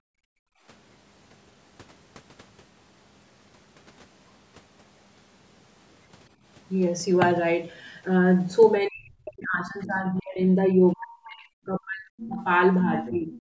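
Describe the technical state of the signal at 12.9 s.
At 12.9 s the speech is being turned down, from 12.84 to 13.34 s, most likely speech suppressed in double talk: the echo canceller treats the talker as loudspeaker echo and attenuates them. The level sags unevenly, by up to about 15 dB, over a few hundred milliseconds rather than dropping to clean silence.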